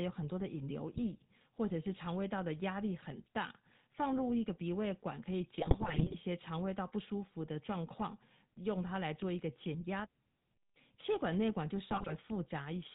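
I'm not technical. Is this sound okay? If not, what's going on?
No, it isn't clean. Throughout, the speech has the buzzy, gravelly roughness of the GSM full-rate codec, an old mobile-phone coding scheme. It rebuilds the voice from a simplified model, cuts everything above 4 kHz, and leaves it sounding dull and rough.

On top of that there are GSM bit errors, where corrupted data from a weak link reaches the decoder and garbles the sound into squawks, pops and gargling. You'll hear brief bursts at 0.94–1.01 s, 5.58–6.15 s and 11.91–12.13 s, with the middle one the longest.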